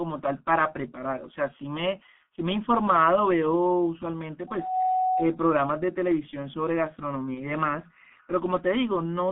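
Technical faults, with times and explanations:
Throughout: G.723.1 codec. The speech is carried by an early internet-telephony codec at about 6.3 kbit/s, squeezed into a telephone band of roughly 200 Hz to 3.4 kHz, and the coding damage is heavy. The codec models the voice in 30 ms chunks and adapts slowly, so the sound is muffled and hoarse and consonants smear together. On a spectrogram nothing appears above 3.4 kHz or below 200 Hz, and the harmonics look blurred and blocky from frame to frame.
7.34–7.50 s: VoIP packet loss concealed by the speech codec. One 30 ms frame went missing, and the decoder filled the gap by continuing its last pitch and spectral shape at falling gain. That repair turns into a short, stretched smear that fades, and because each frame is built on the one before, the voice stays weak and rough for about 0.16 s in all. The waveform shows a dip in level there.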